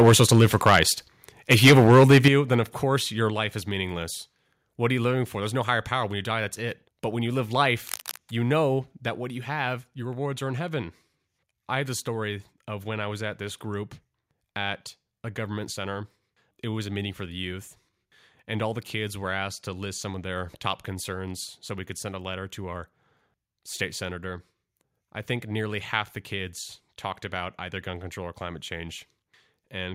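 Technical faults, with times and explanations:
0.00–0.83 s and 1.51–2.28 s, microphone overload: peaks are flattened with a harsh crackle, about 8 dB then about 11 dB over full scale, with roughly a twentieth and then a tenth of samples clipped. This is likely input gain set too high for the converter. The second burst ends just before "then of course your".
0.09 s, 2.28 s and 3.30 s, microphone volume stepped down: the level drops abruptly by 2 dB, 8 dB and 3 dB, the third between "then of course your" and "life is meaningless". This is likely call software cutting the input after the clipping.
7.87–8.17 s, cable scratch noise: a short, uneven scratchy rustle sits about 10 dB below the speech between "when you live" and "you know", likely from a worn cable or connector being jostled.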